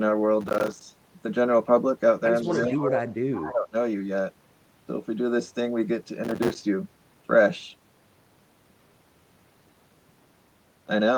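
Processor overload crackle, 0.41 to 0.82 s: the audio processing is falling behind, missing deadline after deadline on what sounds like buffers of roughly 5 ms, and each missed one drops out as a brief hole of silence with hard edges. Dozens of these tiny gaps pile up into a gritty, tearing crackle laid over the speech, which stops once the load eases.

Echo leak, 2.42 to 2.79 s: a faint delayed copy of speech trails the original by 164 ms, about 20 dB below it. This is likely loudspeaker sound picked up by the far side's microphone that its echo canceller failed to remove. Speech suppressed in double talk, 2.43 to 3.06 s: with both sides talking at once, the main speech dips by up to about 10 dB for around half a second, most likely because the canceller could not tell the talker from the echo and pulled both down together.

Echo leak, 3.35 to 3.43 s: a short scrap of the same 164 ms echo returns, louder at about 15 dB below the speech. 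Speech suppressed in double talk, 3.43 to 3.75 s: the speech then drops again, up to about 15 dB, for roughly 300 ms.

Processor overload crackle, 6.24 to 6.55 s: another run of missed buffers, again filled with silence, gives a shorter burst of the same gritty crackle.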